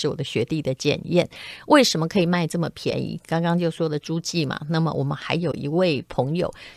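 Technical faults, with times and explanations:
2.91 s and 5.52–5.54 s, AAC frame loss with muting: brief soft-edged gaps, fitting one then two zeroed 10 ms frames, likely from low-delay AAC, faded by overlapping windows.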